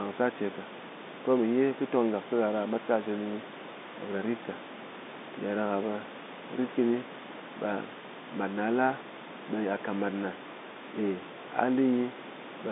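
Nothing goes wrong here: the speech comes across as an ordinary telephone call, band-limited to roughly 200 Hz to 3.7 kHz as the line format expects, with some room noise sitting about 17 dB below the speaker.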